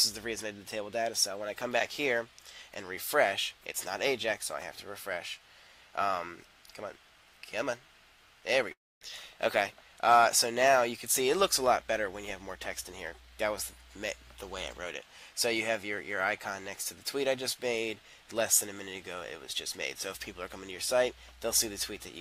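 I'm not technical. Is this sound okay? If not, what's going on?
No. Long network dropout, from 8.71 to 9.04 s: the sound smears into a fading buzz, goes quiet, then resumes with about 0.3 s lost. The connection likely stalled, so the player stretched the last bit of sound to cover the gap.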